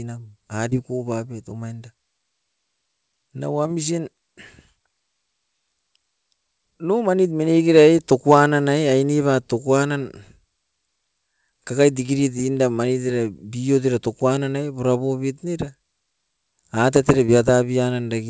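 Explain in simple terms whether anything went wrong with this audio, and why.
Short concealed packet loss: small pieces of the call arrived too late, so the receiver briefly guessed the missing sound, leaving quick smears or wobbles at 0.70–0.73 s (just before "bapet omainda"), 3.63–3.68 s, 12.06–12.10 s and 17.26–17.30 s.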